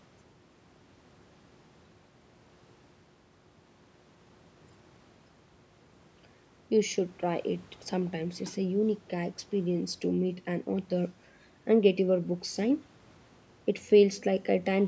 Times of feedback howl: none

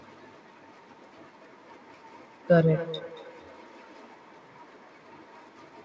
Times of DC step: none

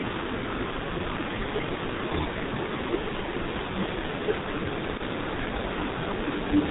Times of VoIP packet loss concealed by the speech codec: 4.97-5.02

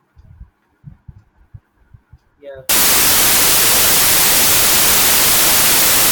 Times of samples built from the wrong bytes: 2.69-6.11

